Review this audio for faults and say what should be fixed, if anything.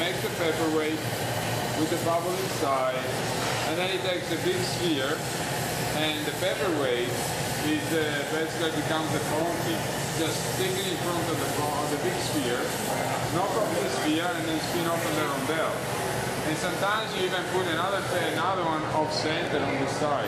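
Nothing to fix: no audible faults anywhere in the clip.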